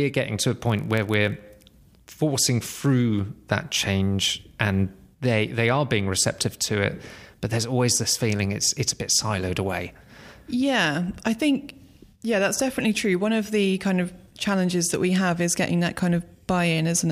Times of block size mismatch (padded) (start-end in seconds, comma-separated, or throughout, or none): 0.58-1.40